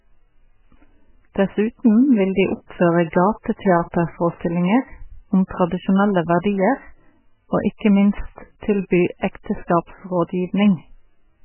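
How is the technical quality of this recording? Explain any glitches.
Pretty rough, honestly. The whole clip carries heavy MP3 compression damage, likely from a very low-bitrate encode. Everything above 3 kHz is simply gone, so the speech sounds dull and boxed-in. The encoder was starved of bits, which fits something around 8 kbps, so it zeroed weak frequency lines that flicker on and off between frames. That gives the watery, swirly texture and smeared consonant attacks throughout.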